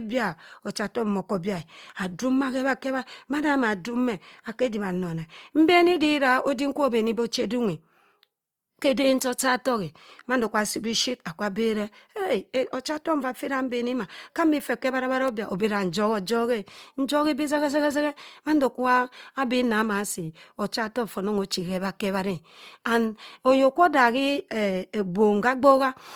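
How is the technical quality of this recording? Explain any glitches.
The recording is compromised throughout by plainly audible compression damage. Across the whole clip the speech sounds rough and grainy, with a noisy, fizzy texture. This is likely Opus compression in its music mode, at a rate near 24 kbps, filling starved bands with folded or noise-like energy rather than leaving gaps.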